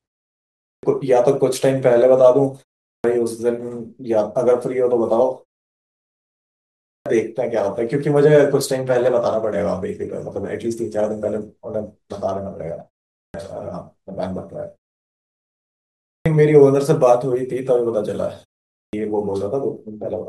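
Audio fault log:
0.69, 2.9, 6.91, 13.2, 16.12 and 18.79 s, clipped start after a pause: after each gap, from 0.34 s to 1.54 s long, the speech resumes abruptly with roughly 0.14 s of its opening sounds missing. The output path goes idle during silence and needs that long to wake before it passes sound again. Unlike muted pauses, which only drop the background in the gaps and return in time, this fault removes the start of the speech itself.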